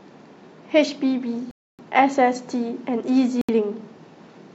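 At 1.51 s the speech drops to silence for about 0.28 s, then again at 3.41 s for 0.07 s, each resuming where it stopped or slightly later: likely a Bluetooth stall from delayed packets draining the buffer.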